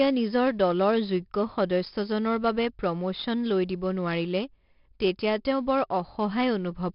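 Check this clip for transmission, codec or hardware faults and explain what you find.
One codec fault runs through the whole speech clip: 4-bit ADPCM compression, heavily applied from start to finish. Each sample is coded as a coarse 4-bit step from a predicted value, so a gritty hiss rides on every loud syllable, and consonant attacks crunch where the step size lags. Nothing above 5.3 kHz suggests a sample rate near 11 kHz, which fits about 44 kbps. A perceptual codec would warble or swirl instead of leaving this level-following hiss.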